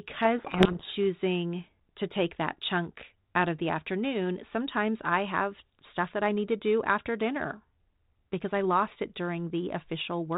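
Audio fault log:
0.38 to 0.93 s, codec payload misread: for just over half a second the speech is buried under harsh, gritty distortion, then clears abruptly. The decoder is reading the G.726 code words with their bit order reversed, so each sample's difference value is wrong and the adaptive predictor drifts off the real signal. The narrowband telephone sound on either side, which fits 32 kbit/s G.726, returns once the packing matches again.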